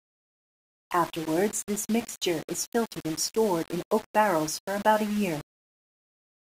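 Speech that is grainy throughout, with the grit rising and falling with the signal at roughly 20 dB below it. It is likely low bit depth without dither, around 5 bits with rounding. Unlike steady hiss, the distortion follows the signal.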